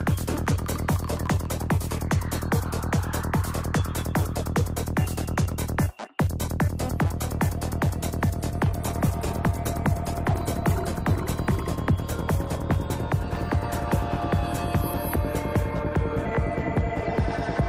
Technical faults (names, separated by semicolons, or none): call bitrate drop